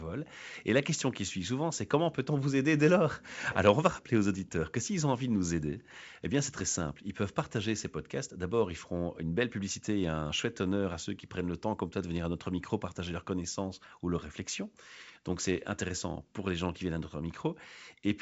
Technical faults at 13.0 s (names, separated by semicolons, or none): none